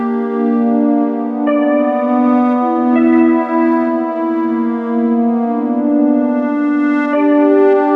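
The music comes through with no technical faults to be heard anywhere in the clip.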